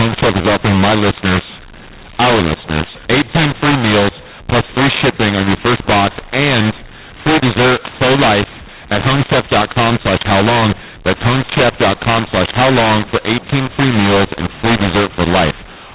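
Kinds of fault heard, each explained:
mu-law and A-law mixed up: harsh, gritty speech with jumbled loudness and hiss filling the pauses, because mu-law telephone samples are being decoded as A-law.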